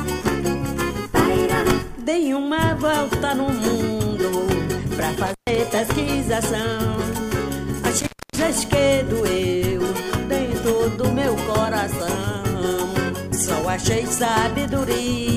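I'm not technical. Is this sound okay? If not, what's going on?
No. Intermittent contact at 5.26 and 7.98 s: a loose plug or cable briefly disconnects, cutting the sound for 0.13 and 0.27 s, with crackles.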